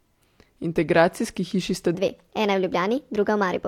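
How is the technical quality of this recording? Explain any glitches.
One glitch stands out: a section at the wrong speed. From 1.95 s to the end at 3.67 s, the speech turns hurried and about four semitones higher, likely from playback at 1.27 times the recorded rate.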